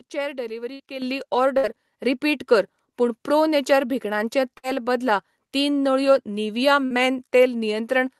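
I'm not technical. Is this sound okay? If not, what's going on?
No. There are four bursts of packet loss, at 0.73, 1.57, 4.57 (just before "बदला तीन नळयो निव्हिया") and 6.85 s (just after it). Each time, about 60 ms of audio never arrived, and the receiver padded the hole by stretching out the last sound and fading it. The microphone volume also stepped up twice, at 1.02 and 2.04 s (just before "रिपीट कर पूण प्रो"), so the voice and background get suddenly louder together.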